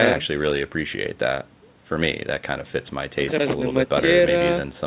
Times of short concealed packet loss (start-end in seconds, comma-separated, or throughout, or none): none